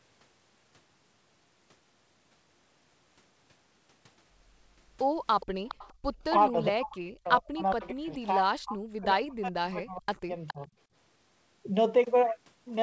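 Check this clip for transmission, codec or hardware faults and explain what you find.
Three echo-canceller faults show up in this speech clip, all between about 5.4 and 10.7 s. The sound stops at 8 kHz, which fits a wideband call codec such as G.722.

Echo leak at 5.40–5.46, 5.66–5.94, 7.70–7.88 and 10.47–10.66 s: likely an echo canceller letting loudspeaker pickup through, heard as a faint copy 416 ms late, about 15–20 dB below speech.

Background gated by the echo canceller at 5.94–6.15 s: the canceller clamps the microphone, so room sound drops by about 30 dB for roughly 100 ms before returning.

Speech suppressed in double talk at 6.49–10.32 s and 10.54–10.68 s: with both sides active, the canceller likely attenuated the talker too. The voice dips or breaks, by up to about 40 dB over roughly 3 s, then about 10 dB briefly.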